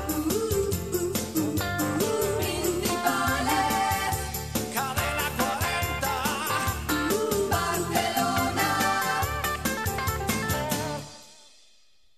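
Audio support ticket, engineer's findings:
No faults found on listening review of the audio. No symptoms to log, no component flagged.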